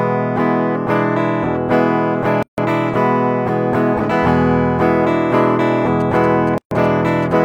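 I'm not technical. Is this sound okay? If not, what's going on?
No, not quite. Two things are going on.

First, there's a gap at a join of encoded pieces. At 2.43 s the sound briefly drops out for about 150 ms, and again at 6.58 s for about 130 ms, then picks up exactly where it left off. They land four seconds apart, which suggests the audio was saved in chunks and stuck back together without trimming the bit of silence each chunk carries at its edges.

Second, from 6.0 s to about 7.3 s you'll hear GSM signalling bursts. That's a galloping dit-dit-dit of short buzzes at 217 Hz, sitting well below the main sound. It comes from an older 2G mobile phone close to the equipment, chattering with the network the way it does just before a call or text comes in. The recording gear picks up those radio bursts and turns them into audible noise.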